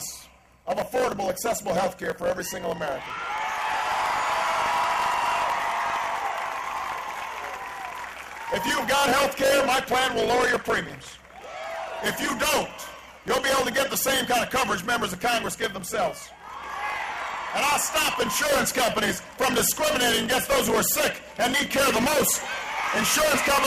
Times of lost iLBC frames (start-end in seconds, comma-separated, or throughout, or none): none